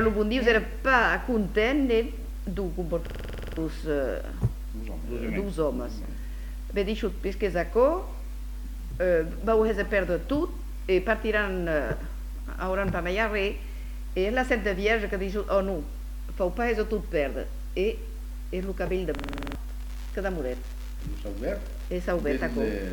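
At 3.07 to 3.58 s and again at 19.18 to 19.55 s, a system hang loop repeats one 46 ms slice, which fits a 2048-sample buffer, at 21.5 Hz, producing a rattling stutter. Unlike a dropout, nothing goes silent, yet roughly half a second and then 0.4 s of audio are lost.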